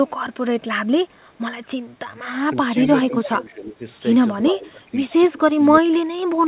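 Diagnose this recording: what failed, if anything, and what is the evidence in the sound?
Call processing: the echo canceller likely misread double talk as echo and ducked the speech at 3.08–3.12, 3.28–3.83, 4.51–4.96, 5.3–5.63 and 5.8–6.32 s. The dips deepen from about 5 to about 25 dB.

Call processing: echo leak, likely a canceller failing to remove all of the loudspeaker pickup, returns a faint copy delayed 326 ms and about 15 dB under the speech at 3.13–3.29 s.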